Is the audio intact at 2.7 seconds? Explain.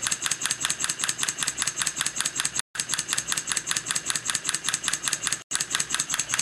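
No. From 2.60 to 2.75 s the sound drops to about 0.15 s of complete silence, then resumes. This is likely a Bluetooth stall: interference delayed packets until the headphones' buffer emptied. The gap is clean silence, not the smeared or buzzy concealment of a lossy-codec dropout.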